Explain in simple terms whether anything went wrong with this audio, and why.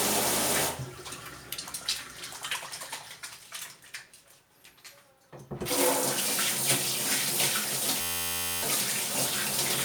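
A system hang loop hits from 8.01 to 8.63 s. For a moment the computer or its sound driver froze, but the sound hardware kept replaying the last tiny slice of audio it was holding, about 11.6 ms long, which fits a 512-sample buffer. That slice repeats around fifty times, about 86 times per second, so it comes out as a steady buzz instead of real sound. Roughly 0.7 seconds of audio is lost.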